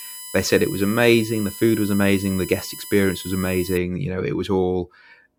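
A speech recording carries USB whine from the start to 3.77 s: a fixed-pitch tone built on 1 kHz, with its energy peaking at the 11th multiple, 11 kHz, roughly 15 dB below the speech. It comes from the bus drawing current in 1 ms frames, which leaks into the audio through power or ground. Mains hum would sit at 50 or 60 Hz and its low multiples, not on this 1 kHz ladder.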